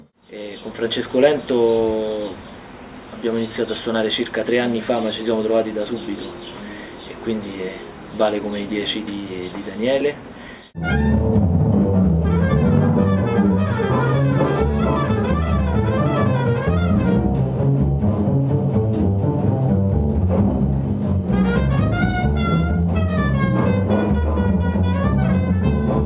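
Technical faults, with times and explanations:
No technical faults can be heard anywhere in this clip. Nothing in the sound calls for a time or an explanation.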